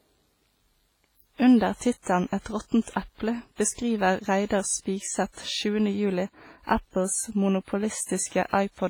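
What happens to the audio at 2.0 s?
At 2.02 s a pre-echo appears: a hiss lasting about 40 ms, up to 2.06 s, that runs ahead of a sharp attack and softens its onset. The transform block's quantisation noise, scaled for the loud attack, spills into the quiet gap before it. On a spectrogram this shows as a smear of broadband energy just left of the attack's vertical edge. The waveform shows a low, grainy ramp before the transient instead of a clean start.

The wider sound has heavy transform-codec damage, likely from WMA compression at a low rate consistent with about 24 kbps. The speech has a ringing, washy quality, with hiss that swells and fades with the signal. On a spectrogram, weak detail appears as blocky patches and holes where quieter components were zeroed.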